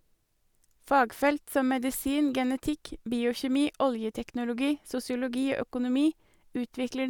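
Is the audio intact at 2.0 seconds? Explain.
Yes, the speech at 2.0 seconds plays through intact, with no dropout, click, distortion or other fault at that moment.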